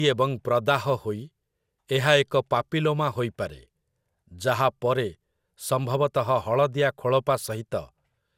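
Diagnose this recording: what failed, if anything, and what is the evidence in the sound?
Throughout the speech the sound is swirly, hollow and smeared, with blunted consonant attacks and nothing above 17.4 kHz. That points to generation loss at the codec stage, likely around five MP2 passes near 128 kbit/s, each re-quantising on a shifted frame grid so the damage compounds.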